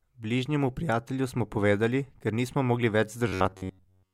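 A short speech clip that turns robotic from 3.28 s to 4.13 s, right after "povedali ker nismo mogli": a rigid metallic buzz near 94 Hz, with most of the sound replaced by repeats. That's robotic sound from repeated short buffers, likely starved input looping roughly 10.7 ms chunks.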